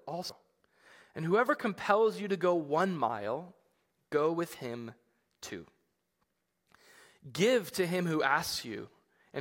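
Compressed frames skipped at 0.29 s: the speech jumps ahead about a fifth of a second, likely seven 26.1 ms frames, leaving a brief smeared blip.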